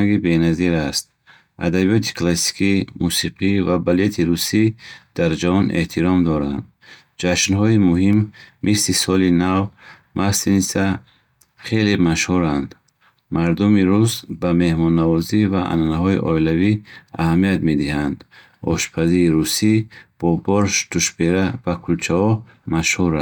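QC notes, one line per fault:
7.96–8.65 s, CD scratch ticks: five evenly spaced ticks, each no longer than about a millisecond, repeat with the disc's rotation, unlike random clicks.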